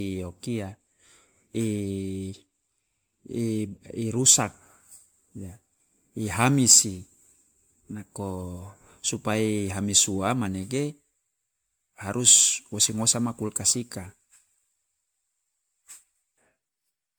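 Right through the speech there's generation loss: swirly, hollow, smeared consonants, and nothing above 19.9 kHz. That's more damage than one pass would leave, so it's likely been re-encoded around ten times, each pass in something like 128 kbit/s MP3.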